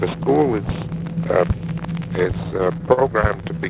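From 2.44 to 3.59 s come repeated stalls (stutter). Late packets drained the jitter buffer fourteen times, and each gap, up to 47 ms, was filled by holding the last sound. Nothing is lost, but the audio drags by 169 ms. On a spectrogram the stalls appear as short frozen stripes.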